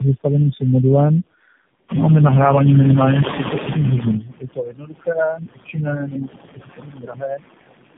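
Noise suppressor artifacts run through the whole recording. Steady background is pulled down by about 21 dB between phrases, leaving a residue that rises and sinks with the speech. Tandem speech coding is also present throughout. Nothing above 3.7 kHz survives, and the speech has a layered roughness and warble, worse than a single low-rate coder would give. That fits about three narrowband speech codecs in a row.

From 1.88 to 4.23 s the noise suppressor is catching up. The room noise climbs about 15 dB near 2 s and first passes through with little reduction. Over about 2.35 s it then sinks by about 18 dB as the estimate adapts. Unlike the steady suppression, this is a slow fade after a jump.

From 4.19 to 7.41 s comes speech cut by the noise suppressor. For about three seconds in total, soft consonants and word endings drop by as much as about 22 dB and sound swallowed. Here the speech itself is lost, not just the background. 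The room noise sits only about 7 dB below it.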